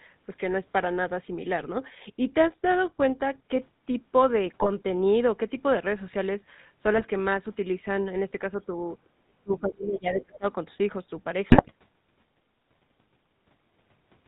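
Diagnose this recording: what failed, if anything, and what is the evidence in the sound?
The codec stage shows damage for the whole recording. The voice has a buzzy, gravelly roughness and nothing comes through above 4 kHz, which fits the GSM full-rate codec at 13 kbit/s. That coder models the vocal tract as a filter and drives it with a sparse, regularly spaced pulse excitation, keeping only every third sample. The coarse excitation is what produces the rasp heard throughout, and the damage is plainly audible.

GSM bit errors sit at the network and radio stage. Squawks, pops and gargling bursts appear at 1.60–1.66 s, 4.47–4.69 s, 6.94–7.06 s, 9.89–9.93 s and 11.50–11.72 s. The longer bursts at 4.47 s and 11.50 s suggest runs of around ten consecutive damaged frames. Corrupted bits reached the decoder, and bad filter, pitch or gain parameters distorted the spectrum or spiked the level for each affected frame.

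Speech suppressed in double talk comes from call processing. At 8.49–8.73 s the talker's level dips by about 5 dB for roughly 150 ms. From 9.43 to 10.45 s it falls much further, around 30 dB, for about a second. The likely cause is the echo canceller reacting to simultaneous speech from the far end: unable to separate the near talker from the loudspeaker echo, it attenuated both.

The other side's voice leaking through is also a call-processing fault. A faint second voice surfaces briefly at 9.04–9.09 s and again at 10.13–10.37 s, sitting around 25 dB below the main talker. The likely cause is incomplete echo cancellation: the far-end voice played on the device's loudspeaker reached the microphone, and the canceller removed only part of it, leaving residual fragments.

Background gated by the echo canceller is another call-processing fault. Right after the first leak, at 9.09–9.15 s, the room sound drops by about 13 dB for roughly 70 ms and then returns. 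While the loudspeaker was active, the canceller's suppressor clamped the microphone path hard. Because it muted the ambient noise along with everything else, a brief hole opens in the background.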